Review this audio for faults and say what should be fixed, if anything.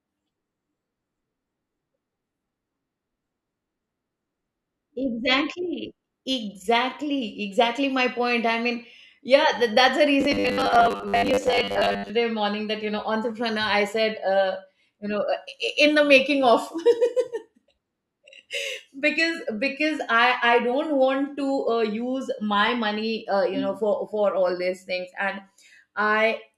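From 10.21 to 12.12 s, between "yeah th that's the" and "morning that you know", the speech becomes robotic sound from repeated short buffers: a metallic 100 Hz buzz, likely from a 10 ms chunk replayed while most incoming audio is skipped. A spectrogram shows rigid 100 Hz harmonic lines, and the waveform shows identical repeating cycles. A larger jitter buffer would prevent it.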